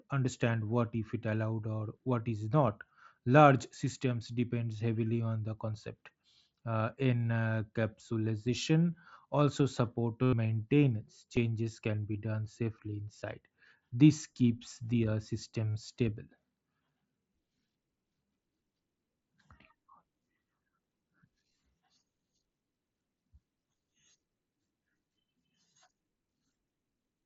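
Speech carried over a Bluetooth headset link shows concealed Bluetooth headset packet loss at 10.23 to 10.33 s, 11.36 s, 13.20 s and 15.75 s. When audio packets from the headset fail to arrive, the receiver fills the gap by repeating the closest-matching recent stretch of waveform. The brief loss at 11.36 s slips by almost unnoticed. The roughly 98 ms run at 10.23 s becomes a buzzy, level-held tone with a slight warble as real speech resumes, and the 45 ms patch at 15.75 s is shorter but similar. The wideband mSBC path itself can be heard as speech band-limited to 8 kHz with faint graininess.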